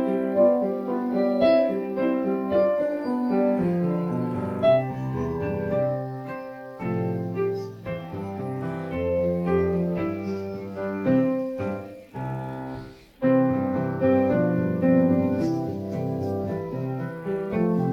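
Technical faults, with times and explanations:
Nothing stood out on listening to this clip.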